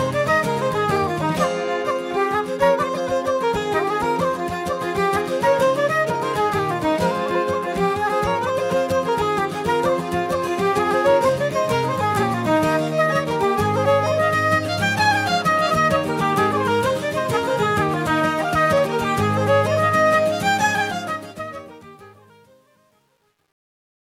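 From 20.72 s to 24.18 s, the fade-out shows truncation distortion. Without dither, the quietest levels collapse into coarse square steps, which fits a 10-bit word length. The tail turns gritty, worst from 21.68 s onward.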